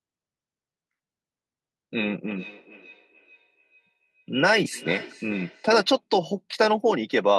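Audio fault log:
2.35–5.98 s, feedback echo between two devices: a second device in the same room is on the call and plays back what this microphone sent, and this microphone hears that playback and sends it again. The echo canceller here only removes what its own device plays, so the copy gets through. The speech comes round again at a steady interval of roughly 0.4 s, each return thinner and more ringing, peaking at about 20 dB below the speech.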